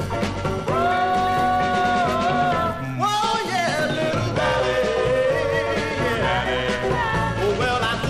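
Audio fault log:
throughout, hard clipping: the signal is driven about 1 dB past what a stage in the chain can carry, so the tallest peaks are sliced flat. Only a small fraction of a percent of the waveform crosses that ceiling, so the damage is confined to the loudest moments. Each flattened top adds a burst of high harmonics, heard as brief crackle or grit on peaks rather than a continuous fuzz over every loud sound.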